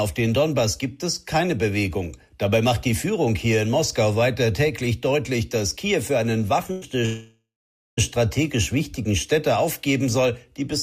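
At 6.71 s a burst of packet loss leaves about 100 ms of audio undelivered; the receiver fills the hole by extending and fading the last sound until 6.84 s, and playback then jumps ahead, the intervening 100 ms simply gone. From 7.06 s to 7.99 s the sound stops arriving, likely a long network dropout: the last sound is stretched into a fading buzz or hiss, nearly half a second of silence follows, and the audio resumes with roughly 920 ms missing.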